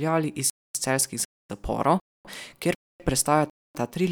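Gaps between chunks occur at 0.50, 1.25, 2.00, 2.75 and 3.50 s, each a 250 ms silence. The speech arrives in 0.5 s chunks, and each chunk begins a quarter second late after the previous one ends, so the sound halts and resumes on a steady 0.75 s cycle. Nothing is missing from the speech itself; it is simply broken apart at every join, giving a regular stop-start stutter.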